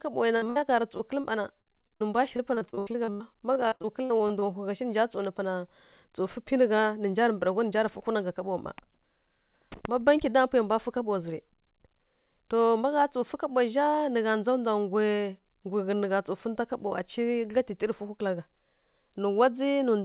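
From 0.36 to 1.26 s, and again from 1.62 to 4.44 s, the speech turns choppy and robotic from repeated packet loss. Gap after gap, up to roughly 60 and 75 ms, gets patched by stretching the last bit of sound, so about a quarter of each stretch is concealment. Throughout, nothing comes through above 4 kHz, which fits a G.711 call path.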